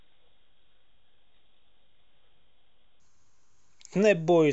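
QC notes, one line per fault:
0.0–3.0 s, wrong sample rate: the speech runs at half speed and drops a full octave, 12 semitones, because the samples are clocked out at half their capture rate without conversion, which fits 44.1 kHz material played at 22 kHz.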